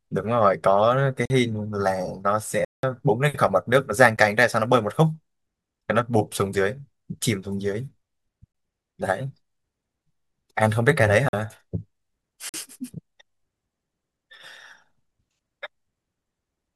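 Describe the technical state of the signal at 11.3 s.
At 11.3 s the speech drops into a block of digital silence, running from about 11.29 to 11.33 s, so roughly 46 ms of silence. The output buffer most likely wasn't filled in time, and a length like that fits a 2048-sample buffer. Because the signal cuts straight to nothing and back with no fade, it comes across as a short hole rather than a single tick.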